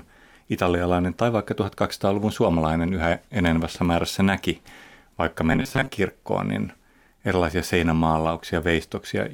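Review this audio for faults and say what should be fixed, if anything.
Robotic sound from repeated short buffers runs from 5.53 to 5.92 s. The speech turns into a rigid, metallic buzz at 134 Hz that still roughly tracks the speech. The likely cause is audio arriving too slowly, so the playback path fills gaps by repeating a fragment of about 7.5 ms, one period of 134 Hz, while real audio is skipped. About half the signal in that stretch is repeated material. Enlarging the jitter buffer and using proper concealment instead of fragment looping would prevent it.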